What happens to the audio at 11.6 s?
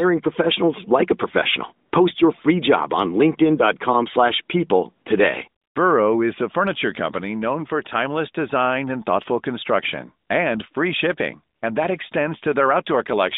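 AMR comfort noise appears from 11.56 to 11.62 s, a 60 ms gap in the transmitted speech. The phone's encoder decided the talker had gone silent and stopped sending speech frames, so the receiving end filled that short stretch with synthetic noise built from a rough estimate of the background's level and spectral shape. The real background drops out and is briefly replaced by a smooth, steady hiss that switches in and then back out.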